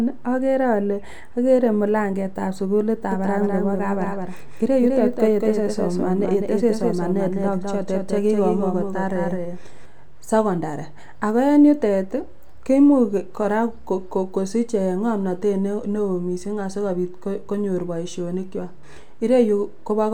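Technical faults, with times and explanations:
3.12–9.86 s, doubled audio track: a second copy of the speech runs about a fifth of a second behind the first and a few dB quieter. It's dry and full-band, cutting in abruptly and cutting out abruptly just before "secondary ako". That's likely a slower second capture path mixed in.
18.83 s, damaged data in a compressed stream: right after "konyor boishoni kwak" there's a quick blip. The decoder hit corrupted frames, lost sync and skipped ahead to the next valid header, so you get a brief glitch.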